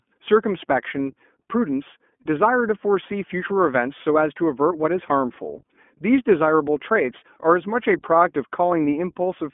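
From start to finish the speech has passed through the iLBC codec. The line band runs from about 200 Hz to 3.4 kHz, so everything above that is missing and the low end is thin. Each 20 ms frame's excitation is coded on its own, and the plainly audible coding damage gives the speech a rough, slightly synthetic texture, consistent with iLBC's 15.2 kbps mode.

Between 7.18 and 7.23 s there is a burst of lost iLBC frames. The decoder fills the hole by repeating the last pitch cycle blended with noise, heard as a short, held, faintly buzzy vowel lasting roughly 40 ms, which fits two 20 ms frames going missing. Because iLBC frames stand alone, normal speech returns right after the gap, with no lingering smear.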